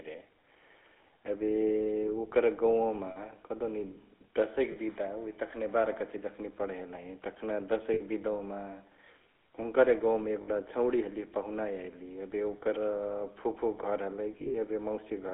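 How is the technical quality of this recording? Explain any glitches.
The recording has phone-grade quality, with a constant codec coloration and five brief glitches.

The GSM full-rate codec shapes the whole recording. The band is limited to about 300 Hz–3.7 kHz, and the vocal tract is rebuilt from a sparse pulse excitation at around 13 kbps. That gives the speech a plainly audible buzzy, gravelly grain, which sets it apart from a clean telephone band-limit.

Lost GSM frames occur at 3.10–3.18 s (60 ms), 4.72–4.77 s (40 ms), 7.94–8.01 s (60 ms), 10.42–10.49 s (60 ms) and 14.38–14.55 s. The last one is about 100 ms of gaps spread over 160 ms, the longest run around 40 ms. These lengths fit two to five 20 ms frames. The decoder repeats the last good frame, so you hear a brief metallic, ringing smear rather than a silent dropout.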